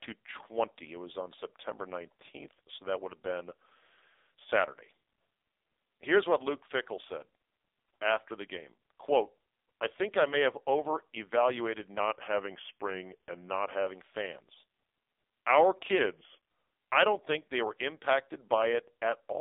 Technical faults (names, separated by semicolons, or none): AMR narrowband mobile codec; drift correction step